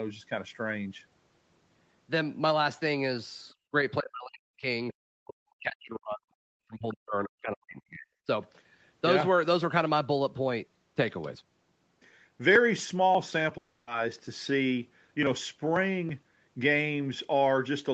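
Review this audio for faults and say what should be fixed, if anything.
Other side's voice leaking through: two brief scraps of a second voice, at 3.49 to 3.53 s (around 40 dB below the main speech) and 6.89 to 6.94 s (around 20 dB below). The likely cause is loudspeaker playback reaching the microphone, with the echo canceller not removing all of it. On a spectrogram these show as short, faint harmonic patches that don't line up with the main talker's pitch track, more visible at 6.89 s. To prevent it, use a headset or lower the loudspeaker volume so less echo reaches the microphone.

Background gated by the echo canceller: from 3.55 to 3.71 s, right after the first leak, the room sound drops by up to about 23 dB for about 150 ms, then returns. The canceller pulled the microphone down while the loudspeaker was active. The waveform shows a short notch in the noise floor, and the spectrogram shows a vertical band where the background texture briefly thins out. 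To prevent it, make the echo suppressor less aggressive, or add comfort noise so the floor stays even.

Speech suppressed in double talk: the speech dips deeply, around 40 dB at worst, from 4.01 to 4.67 s (roughly 0.7 s) and from 5.24 to 8.28 s (roughly 3 s). The likely cause is the echo canceller failing to separate this talker from loudspeaker echo during overlapping talk and turning both down. The waveform shows the speech envelope collapsing in pieces, and the spectrogram shows gaps or lost upper harmonics across those spans. To prevent it, use echo cancellation with proper double-talk detection, or a headset.

Long network dropout: from 13.57 to 13.89 s, about 300 ms of audio never arrived. The receiver filled the whole gap, carrying the last sound forward as a fading buzz or hiss with no silent portion, and then resumed without the lost material. The likely cause is a network interruption. 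On a spectrogram this looks like smeared, repetitive harmonics that decay, followed by an abrupt jump in content. The coding noise and the top end stopping near 8 kHz belong to the normal call path. To prevent it, use a more stable connection with in-band forward error correction enabled.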